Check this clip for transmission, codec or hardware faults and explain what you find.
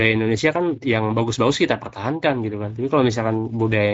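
One codec fault runs through the whole speech clip.

Speex codec, throughout: the CELP coder's thin excitation makes speech hoarse and noisy, which fits roughly 16.8 kbps. Nothing reaches above 7.7 kHz, and there is no swirly warble as from transform codecs.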